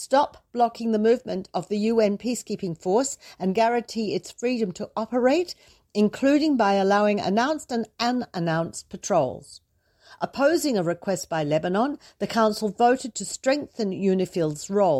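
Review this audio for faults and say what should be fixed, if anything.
Nothing here needs fixing.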